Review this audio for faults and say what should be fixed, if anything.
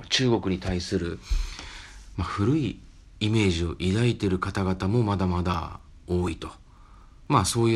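Periodic USB or driver dropouts run from 5.54 s to 7.52 s, a tick every 0.248 s in the speech. Something stalls the USB bus or audio driver on that schedule, and each time about 2 ms of audio is skipped outright, leaving a small splice click.

To prevent it, find and disable the background task or power-saving feature polling the USB bus, and give the audio device its own port with a larger driver buffer.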